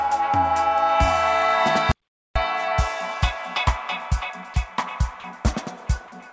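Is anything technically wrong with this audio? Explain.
Yes, there are two kinds of fault, heard through a G.722 call path with nothing above 8 kHz.

From 1.92 to 2.36 s the sound cuts to silence for about 440 ms, with no room tone beneath it. This is an audio dropout to silence, likely an input disconnect or mute while the recorder kept writing zeros. Whatever occurred in that gap is lost.

At 4.54 to 4.56 s and at 5.20 to 5.24 s, brief stretches of sound give way to flat, steady noise for 20 ms and 40 ms. This is sound dropped by the voice detector, which likely judged quiet material as background and stopped sending, so the receiver filled in comfort noise.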